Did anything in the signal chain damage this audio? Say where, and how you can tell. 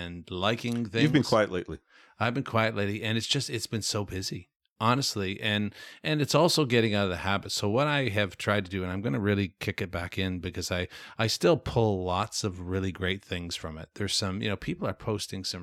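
No, nothing in this speech stood out on listening as damage from any stage of the signal chain.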